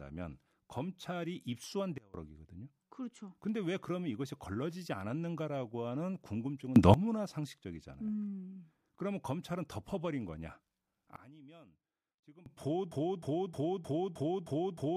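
At 1.98 s the level of the speech and its background noise drops abruptly together by about 24 dB, and it returns at 2.14 s. At 6.76 s both jump up by about 20 dB, and they fall back at 6.94 s. A third drop of about 22 dB runs from 11.16 to 12.46 s. These sudden gain jumps are likely digital gain changes applied from one sample to the next with no ramp.

From 12.92 s to the end, a 310 ms fragment repeats exactly, back to back, seven times. This broken-record loop likely comes from a stalled player or stream resending its last buffered piece, so the audio that belonged there is lost.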